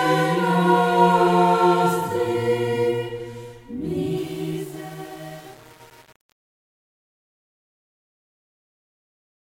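A music clip whose fade-out, starting around 4 s, suffers truncation distortion from 4.17 s to 9.6 s. Without dither, the shrinking level turns gritty, which fits only about 7-bit resolution. The waveform shows blocky square steps, and the spectrogram shows broadband speckled noise near the tail.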